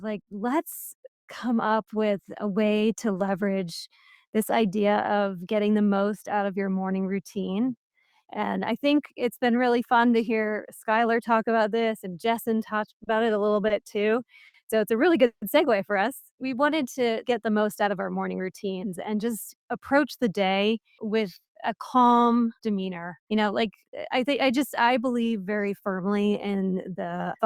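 From 13.04 to 15.45 s the audio shows repeated stalls, a stutter. Delivery fell behind playback four times, and each gap was bridged by continuing the last sound, 270 ms in all, longest 160 ms. Nothing is lost, but the sound drags. A spectrogram shows smeared, held stretches; the waveform shows repeated cycles fading on the longest one.

Jitter buffer speed-up follows from 17.31 to 18.48 s at 111% speed, dropping roughly 150 ms, and from 25.32 to 25.65 s at 113%, dropping roughly 50 ms. Short pitch-period slices were cut to shrink excess buffering, so the sound hurries without a pitch shift. Spectrogram harmonics stay level while events bunch closer together.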